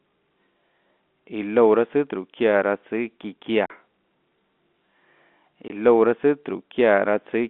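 Packets went missing and the receiver played silence in their place, at 3.66 to 3.70 s (40 ms, which fits two 20 ms packets) and 5.68 to 5.70 s (20 ms). The speech drops out abruptly, with hard edges, over the narrow telephone-band G.711 line.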